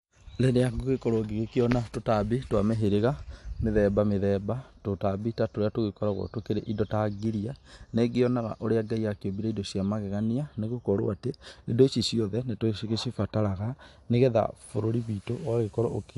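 Speech recording with no technical faults audible anywhere.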